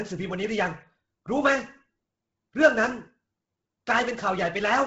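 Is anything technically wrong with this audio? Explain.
Yes. Throughout, the speech has a breathy, grainy edge and nothing above 7.8 kHz, which points to heavy Bluetooth LC3 compression, likely at a low bitrate around 16 kbps. The codec discards much of the upper spectrum and fills the gaps with noise, which gives the speech that fizzy, grainy texture.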